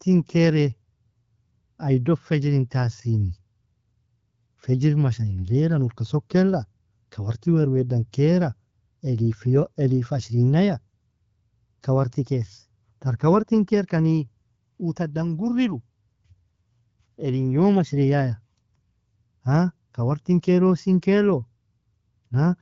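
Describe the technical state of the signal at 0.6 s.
At 0.6 s the speech is intact, carried cleanly through the AMR wideband (HD Voice) codec at 12.65 kbit/s with no fault present.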